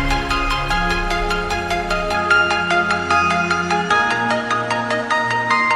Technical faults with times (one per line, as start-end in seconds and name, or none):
2.15-5.75 input switched to a poorer device